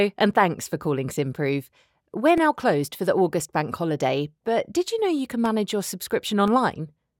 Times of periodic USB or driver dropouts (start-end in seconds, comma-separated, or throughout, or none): 0.33-6.48